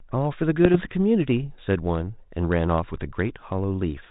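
From 0.65 to 0.79 s the speech, carried over a 32 kbit/s G.726 ADPCM path that keeps nothing above 4 kHz, is hit by bit errors on an ADPCM link. A low error rate, a small fraction of a percent, flips stray bits, and each one knocks the decoder's step size and predictor off track, so the damage rings on briefly as pops and rough, level-jumping bursts. Unlike a packet-loss dropout, the sound never goes silent or repeats; it turns gritty and unstable instead.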